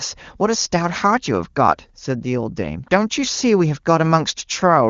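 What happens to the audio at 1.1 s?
At 1.1 s the speech is intact, carried cleanly through the AMR wideband (HD Voice) codec at a rate high enough, by the sound of it, that it stays clear rather than rough or raspy.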